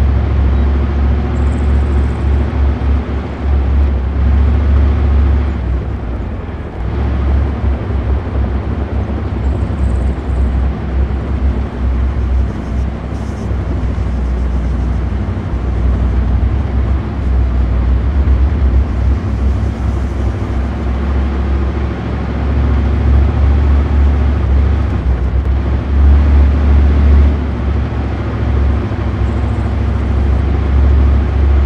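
No technical faults can be heard anywhere in the recording, and the signal holds steady throughout without any disruption to its flow or level.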